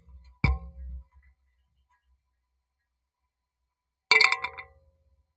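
A recording of everyday sounds passed through call microphone processing, with nothing above 8 kHz. A noise suppressor meant for speech stays active on non-speech material for the whole clip. It treats steady and decaying content as noise, so level swings by around 20 dB as it clamps down and releases, producing audible pumping and a thinned texture. The clearest cases of sound cut by the noise suppressor fall at 0.00 to 0.42 s, where nearly the entire span sinks by up to about 15 dB, and at 1.03 to 2.62 s, where roughly a second of held or fading material drops by up to about 16 dB and decays are truncated while sharper onsets still pass.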